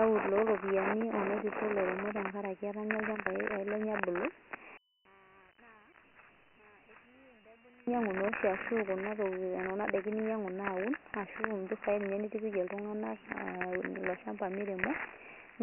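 Dialogic VOX ADPCM runs throughout: heavy 4-bit coding with nothing above 3 kHz, which fits 6,000 samples a second, leaves speech muffled and trailed by a gritty hiss.

From 4.77 to 7.87 s, the speech drops by about 24 dB to a faint remnant, likely one channel inverted, cancelling the shared centre when summed to mono.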